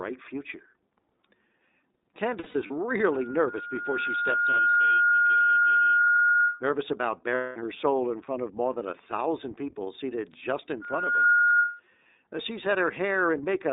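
The whole recording passes through the iLBC codec, so the speech sits between roughly 250 Hz and 3.7 kHz. On a spectrogram, everything above 3.7 kHz is an empty band. The damage is plainly audible as a rough, slightly synthetic buzz. The coder handles each block of audio on its own, and the character fits 30 ms frames at 13.33 kbit/s.

From 2.40 to 2.71 s there are lost iLBC frames. About 150 ms of audio is missing, scattered over 300 ms, and the longest gap is around 70 ms. The decoder fills each hole by repeating the last pitch cycle with added noise. This sounds like a brief held, breathy vowel. On a spectrogram, a few evenly spaced, smeared harmonic stripes replace the changing speech.

At 3.06 s a loudspeaker feedback squeal begins at 1.4 kHz. The microphone is picking up its own loudspeaker, and at that frequency the loop's gain is above one. The tone grows over about two seconds to a few dB above the speech and stops at 6.63 s. 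On a spectrogram it is a single bright horizontal line that thickens as it swells.

Within the squeal, another lost frame at 4.71 to 4.74 s leaves a 30 ms buzzy patch. The speech recovers almost at once.

From 7.35 to 7.57 s, 210 ms of lost iLBC frames give a longer held, buzzy vowel. In the waveform, a regular repeating cycle replaces the speech, and it fades as the gap goes on.

The squeal returns at 10.82 s, again at 1.4 kHz. This time it builds in about half a second to around ten dB above the speech. It is a louder howl, and it stops at 11.80 s.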